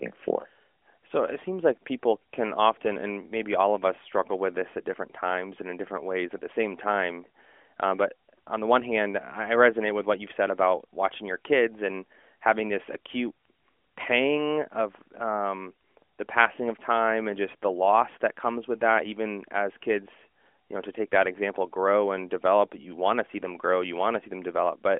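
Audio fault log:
No faults detected; the speech is heard through a narrowband mobile codec path, its band confined to about 200 Hz to 3.4 kHz.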